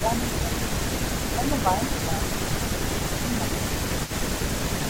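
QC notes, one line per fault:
0.00–0.04 s and 0.37 s to the end, echo leak: a faint delayed copy of the speech trails it by 217 ms, at first about 20 dB below the speech and then about 15 dB below from 0.37 s on. The likely cause is a far-end loudspeaker echo that the echo canceller failed to remove and sent back.
0.00–0.95 s and 1.34–3.69 s, speech suppressed in double talk: the speech dips by as much as about 10 dB in patches, adding up to roughly 0.7 s in the first span and 1.5 s in the second. The likely cause is both sides talking at once, so the echo canceller turned down the talker along with the echo.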